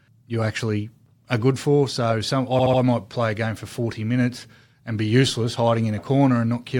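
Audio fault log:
2.58–2.80 s, repeated frames: a short chunk of about 72 ms gets played over again three times, so the speech stutters in place for a moment before carrying on. What's happening is that a run of compressed frames got written or delivered more than once, and the decoder plays each copy faithfully, so the clip ends up 216 ms longer than it should be. The 72 ms repeat length suggests a small run of codec frames was duplicated.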